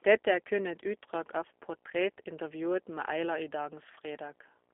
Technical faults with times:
0.00-4.74 G.729 codec

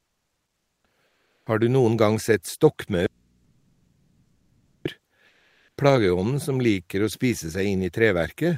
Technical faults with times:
0.00-1.46 comfort noise in place of the background
3.06-4.85 audio dropout to a faint residue
5.28-5.77 comfort noise in place of the background

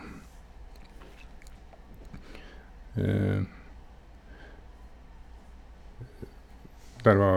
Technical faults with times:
none

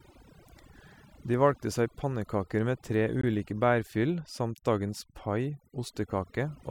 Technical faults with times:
0.00-6.71 overdone noise removal
3.21-3.24 gap between stream segments

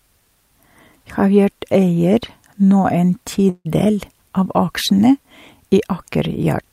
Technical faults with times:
3.49-3.67 call audio freeze

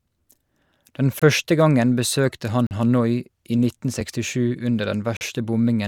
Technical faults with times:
1.19-1.22 block of digital silence
2.67-2.71 block of digital silence
4.01 block of digital silence
5.17-5.21 block of digital silence

